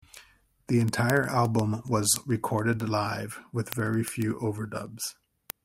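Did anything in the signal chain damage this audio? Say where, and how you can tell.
Yes. Throughout the clip, from 0.10 s to 5.64 s, there is a steady train of sharp ticks of uneven strength, about 70 in all, recurring roughly every 0.07 s. These are word clock ticks at the digital interface between two devices. The receiving converter runs on its own clock rather than locking to the sender's, with the two clocks off by a few hundred ppm. Each time they slip past each other, a single sample is dropped or repeated, producing one tick.

At 3.76 s a brief burst of burbling sits over the speech. This is DAB burbling from the broadcast reception and codec stage. Weak reception let bit errors, around a tenth of a percent, get past the error correction into the MP2 audio data. The corrupted samples put short blips of noise into single sub-bands across four frames.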